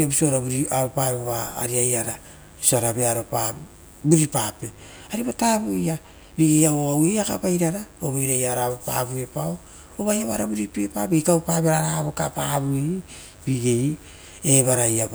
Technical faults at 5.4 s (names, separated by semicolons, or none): mains buzz